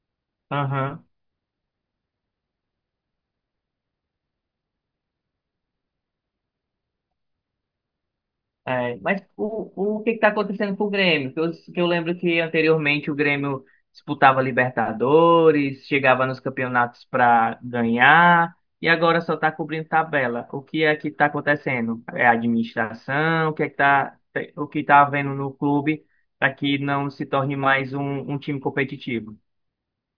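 No technical faults can be heard anywhere in the recording.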